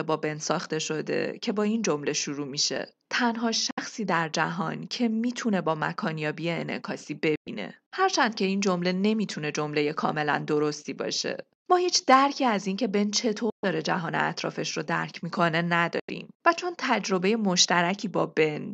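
The speech cuts to silence four times, at 3.71–3.79 s, 7.35–7.48 s, 13.50–13.64 s and 15.99–16.10 s, with holes of roughly 64, 107, 128 and 85 ms. This is a Bluetooth dropout, likely packets arriving too late at the headphones and being discarded. The tell is that speech resumes as if it had kept playing, with the missing stretch simply skipped, rather than pausing and picking up where it stopped.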